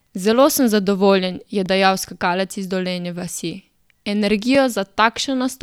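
Two sharp ticks break the speech at 1.66 s and 4.55 s: blocks of digital silence, roughly 0.7 ms and 2.9 ms long, likely where output buffers went briefly unfilled.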